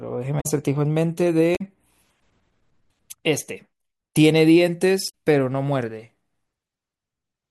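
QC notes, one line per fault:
0.37–0.46 s, 1.53–1.61 s and 5.06–5.10 s: damaged data in a compressed stream. Three brief chirps or squawks of 40 to 90 ms break into the speech where corrupted bytes made the decoder misread frames, lose sync and hunt for the next valid frame header.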